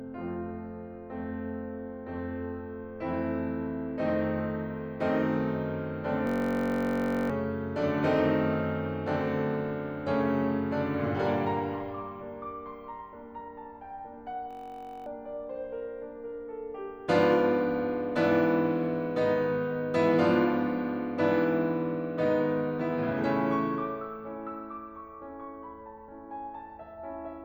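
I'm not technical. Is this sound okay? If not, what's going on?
No. Twice, at 6.27 to 7.30 s and 14.51 to 15.06 s, the system hang loop occurs: the computer briefly froze while the sound hardware kept replaying its last tiny scrap of music, about 21 ms long. That scrap repeats roughly 47 times a second, so the music becomes a steady buzz, and about a second, then half a second, of music is lost.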